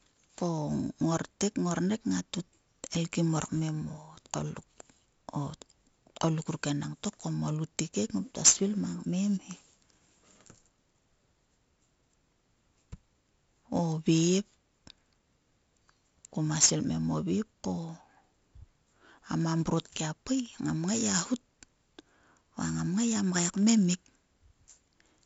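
From start to finish, the speech carries 4-bit ADPCM compression. Each sample is coded as a coarse step from a predicted value, and the step size lags on fast changes, so a gritty hiss rides on every loud syllable and sharp onsets smear into distortion. The damage is heavy. A spectrogram shows broadband noise rising and falling with the speech level and a hard ceiling near 7.7 kHz, which points to 16 kHz sampling at 64 kbps.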